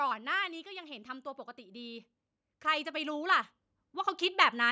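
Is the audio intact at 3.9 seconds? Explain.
No, automatic gain rising runs from 0.63 to 4.67 s: the control lifts a quiet input by about 12 dB, so voice and background swell together slowly, unlike a sudden level jump.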